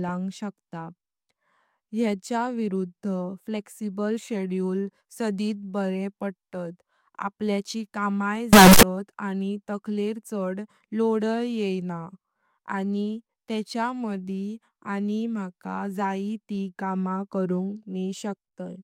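From 8.53 to 8.83 s, after "बरे पडतात आपल्याची कमाई", speech turns into a harsh, squared-off blast, with noise as loud as speech. This is likely float read as integer, with 32-bit float samples taken as integers.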